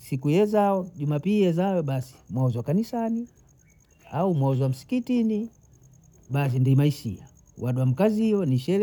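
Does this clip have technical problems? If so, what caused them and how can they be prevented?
No, no technical faults are audible in this speech recording, so nothing needs preventing.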